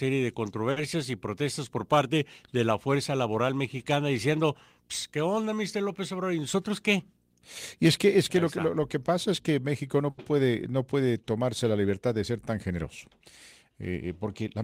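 At 0.71 s, just before "y protestas por parte", there is a short stall from a late packet. The next packet missed its slot, the jitter buffer ran dry, and the receiver held the last sound for 50 ms until it arrived, losing nothing. The speech hangs briefly with a faint buzzy sustain. On a spectrogram the harmonics run flat and unchanged across the gap, and the waveform repeats near-identical cycles.

From 6.54 to 7.09 s, a jitter buffer speed-up plays the speech at 107% of its pace. Audio had piled up in the buffer, so the receiver trimmed several short pitch-period slices, about 50 ms in all, to bring the delay back down. The speech sounds slightly rushed but keeps its pitch. On a spectrogram the harmonic spacing stays put while syllables look compressed in time, and the waveform shows small splice points between cycles.

At 10.10 s, before "puede no puede tomarse", a second stall stretches the held sound for 80 ms. 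It is longer than the first, again with flat spectral bands and repeated waveform periods before normal motion resumes.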